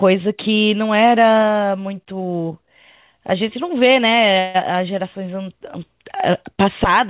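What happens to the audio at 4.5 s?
A call audio freeze runs from about 4.39 to 4.56 s. The speech stops advancing and the last sound is stretched into a fading buzz or hiss for roughly 150 ms, then continues exactly where it left off, so nothing is lost but everything after arrives about 150 ms later. The likely cause is packets held up in transit, draining the jitter buffer until the receiver had to invent filler, heard here through the 4 kHz-limited band of the call path.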